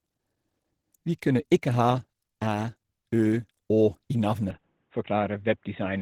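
From the start the speech has a hoarse, muffled grain, likely Opus compression in its hybrid speech mode at a low bitrate, around 16 kbps. At 4.51 s it abruptly turns dull and boxy with nothing above 3.8 kHz, with no gap and about the same level: the input was likely switched to a poorer device.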